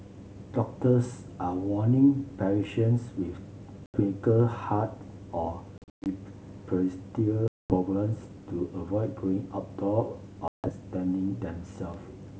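Packet loss on an ADPCM call cuts holes at 3.86 s (about 80 ms), 5.78–6.07 s (220 ms scattered over 280 ms, longest gap 120 ms), 7.48–7.76 s (220 ms) and 10.48–10.70 s (160 ms). Each gap drops to abrupt silence. The wideband G.722 decoder's predictor and step size drift from the sender's, so speech resumes with brief, slight distortion, settling within tens of milliseconds.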